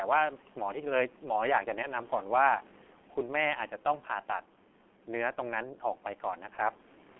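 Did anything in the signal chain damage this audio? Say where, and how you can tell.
Yes, at the codec stage. The speech carries heavy G.723.1 codec damage throughout, passing only 200 Hz to 3.4 kHz. A spectrogram shows an empty band above 3.4 kHz and smeared consonant energy. The hoarse, muffled sound fits coarse 30 ms frames at about 6 kbit/s.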